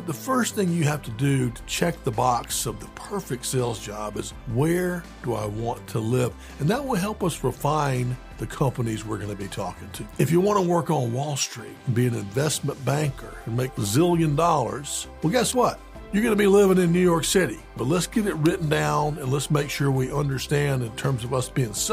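Electrical switching spikes at 2.44 s and 15.53 s are sharp snaps laid over the sound, peaking well below full scale, likely from a nearby switch arcing into the audio line.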